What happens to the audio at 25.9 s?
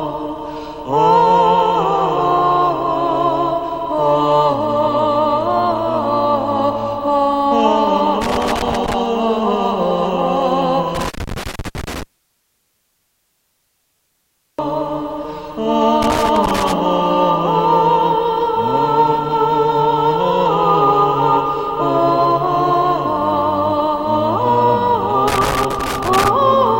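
At 25.9 s a worn or dirty contact is making and breaking as the connector shifts, and that loose connector crackle runs from 25.28 to 26.28 s. The signal is chopped on and off, with pops from any DC on the line, heard as an irregular burst of scratchy crackle.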